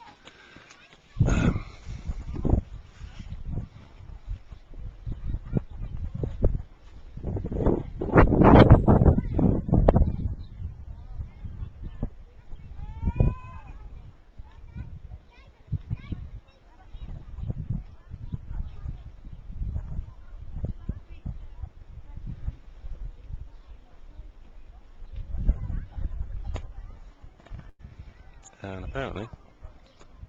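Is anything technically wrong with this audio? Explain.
Yes. From 27.69 to 27.89 s the sound stalls: for about 95 ms the last moment is stretched into a sustained, fading buzz or hiss, and then the audio picks up again with roughly 100 ms of material skipped. This is a burst of packet loss. Several consecutive packets never arrived in time, so the receiver extended and faded what it last had to bridge the hole and then rejoined the stream further along.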